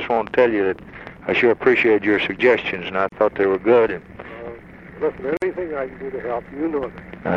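At 3.09 s the sound drops out for about 35 ms. At 5.37 s it drops out again for about 51 ms. Each is a gap at a join of encoded pieces. Separately encoded segments were butted together untrimmed. Encoder delay and end padding left silence. The edges are smeared, and the sound resumes where it stopped.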